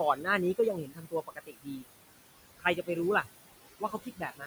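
Across the whole clip the background pumps, dropping away between phrases and swelling back under them. These are noise suppressor artifacts: the suppressor pulls the room noise, which sits about 12 dB under the speech, down by about 19 dB frame by frame. Speech cut by the noise suppressor shows up at 0.15–0.27 s, 0.55–1.85 s, 2.59–2.88 s and from 3.8 s to the end, where soft sounds turn faint or swallowed. The suppressor mistakes them for noise and lowers them by up to about 10, 22, 16 and 20 dB, affecting roughly a tenth of a second, about 0.7 s, a tenth and a third of a second respectively.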